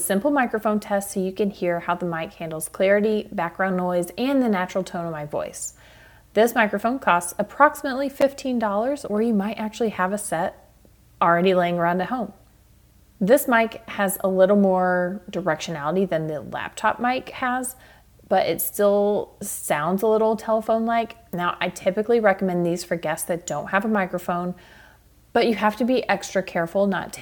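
At 8.21 s, a block of digital silence: about 8.7 ms of samples dropped to silence, cutting out and back without a fade, heard as a single tick.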